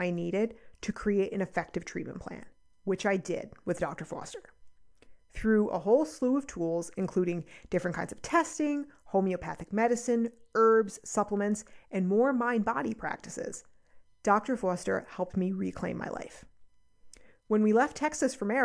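No faults detected anywhere in the speech recording.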